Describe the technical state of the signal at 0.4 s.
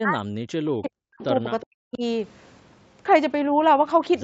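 Speech suppressed in double talk, 0 to 1.21 s: the speech dips by up to roughly 40 dB in pieces, likely an echo canceller muting the talker during overlapping talk.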